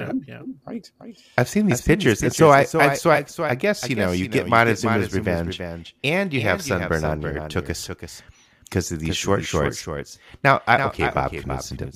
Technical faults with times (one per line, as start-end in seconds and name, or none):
0.00-11.95 doubled audio track